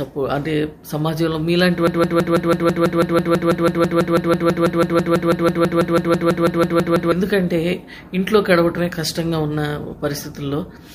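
The audio has a broken-record loop from 1.87 s to 7.12 s. A 164 ms fragment repeats back to back 32 times, identical each pass. Whatever should have played there is gone. The likely cause is a stalled player, encoder or stream resending its last held fragment.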